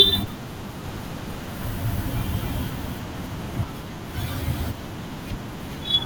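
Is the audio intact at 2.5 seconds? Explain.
No. From 0.84 to 3.64 s the speech carries a doubled audio track: an equally loud copy trailing by about 300 ms, likely from a slower capture path. On a spectrogram each syllable's pattern repeats, shifted right, undecayed, starting and stopping abruptly.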